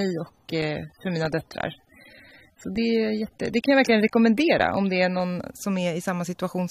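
Until 5.21 s the adaptive stream starting at a low bitrate sounds dull and smeared. Speech then sharpens abruptly with no gap, unlike a rebuffer.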